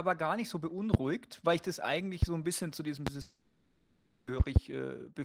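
A loud pop lands at 0.94 to 0.97 s, between "gar nicht so" and "weil ich das eigentlich", and again at 2.22 to 2.26 s, after "weil ich das eigentlich" and before "so ein bisschen zu". A third, slightly softer one comes at 3.07 to 3.10 s. Each is a sharp single click standing well above the speech, which carries on underneath. That continuity is what separates it from a gap. The likely cause is a brief voltage spike, such as a switch or static discharge.

A long network dropout follows from 3.21 to 4.28 s, right after "ein bisschen zu diesem". About 1.06 s of audio is lost, replaced by a smeared continuation of the last sound that fades. The speech resumes further on with that part missing. Unlike the pops, nothing continues beneath it.

Between 4.40 and 4.59 s, a double loud pop follows, two thumps in quick succession at a similar strong level.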